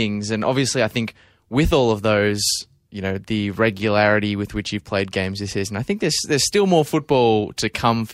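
Nothing to flag: no technical faults are audible at any point in the recording.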